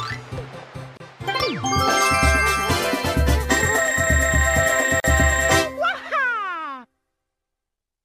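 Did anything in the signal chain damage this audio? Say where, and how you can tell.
Yes, at the codec stage: there is a gap at a join of encoded pieces. The sound drops out at 0.97 s for about 29 ms and again at 5.00 s for about 40 ms, four seconds apart, each time resuming exactly where it left off. Separately encoded segments were joined without trimming the encoder's start delay and final-frame padding. Unlike network packet loss, nothing is missing and the silences fall on a regular segment boundary.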